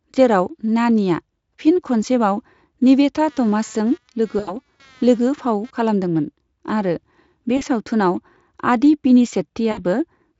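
From 3.29 s to 5.71 s, computer activity noise rides under the speech. It is a faint buzz pulsing at about 200 Hz, roughly 35 dB below the speech. Processor or peripheral load is disturbing the audio circuit's shared ground. It stops just before "खालामदोंमोन आरो बे".

VoIP packet loss concealed by the speech codec breaks in at 4.39 to 4.58 s, an 80 ms gap that fits four lost 20 ms frames. The decoder fills it by repeating its last pitch and filter at falling gain. This gives a short buzzy smear. It recurs for 40 ms at 7.57 s, right after "खालामदोंमोन आरो बे", and for 60 ms at 9.71 s. The Speex coding itself leaves little audible damage.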